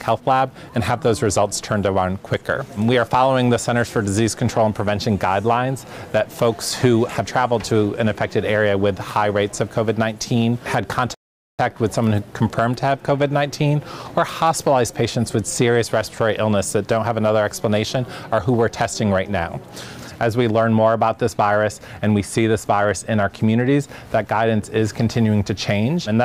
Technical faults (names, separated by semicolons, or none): rebuffering stall